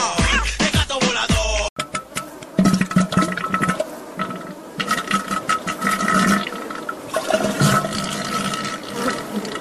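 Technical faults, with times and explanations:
Throughout, sample clock jitter: a wobbly converter clock of roughly 2 µs smears timing, adding hiss about 30 dB down that swells with loud, bright sound.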